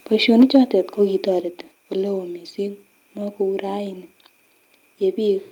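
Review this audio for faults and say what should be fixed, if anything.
From 0.29 to 0.57 s the speech takes on a harsh, crackling edge on its loudest moments. This is likely microphone overload. The input level was set high enough that peaks ran about 2 dB past the converter's ceiling. Their tops were sheared flat, with a few percent of samples pinned at the limit. Flattened peaks create new harmonics, and those are heard as grit. Keep the microphone input gain lower so the loudest peaks stay clear of full scale.

The microphone volume is stepped down twice. The level drops abruptly at 0.42 s by about 3 dB, and again at 1.41 s by about 4 dB. Speech and background fall together, with no fade. This is likely the call software reacting to the clipping. It lowered the device's input volume in single jumps rather than smoothly. The first step lands right inside the distorted stretch. Turn off automatic input gain adjustment and set a fixed, moderate level instead.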